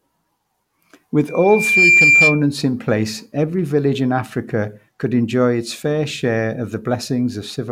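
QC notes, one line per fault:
1.27–2.44 s, loudspeaker feedback squeal: a single piercing tone at 2.4 kHz swells out of the speech over roughly half a second and then holds, sitting about 10 dB above the voice until it cuts off just before "in place every village". The microphone was picking up the loudspeaker it drives, and at 2.4 kHz the round-trip gain went above unity, so that frequency kept reinforcing itself into a sustained squeal.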